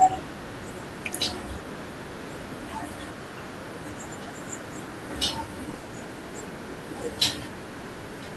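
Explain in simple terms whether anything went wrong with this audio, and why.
Short concealed packet loss hits at 5.71, 5.75 and 5.79 s. Each time, 20 ms of the call arrived too late, and the receiver patched it by stretching the preceding sound. That makes a brief smear or wobble rather than the silent gap of a plain dropout.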